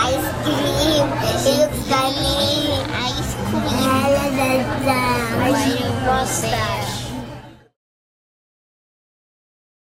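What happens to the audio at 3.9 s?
Nothing goes wrong at 3.9 s; the audio plays through that moment intact, with no dropout, click or distortion.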